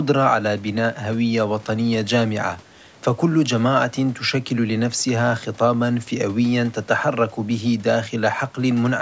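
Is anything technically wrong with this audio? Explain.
No, nothing is technically wrong with this audio.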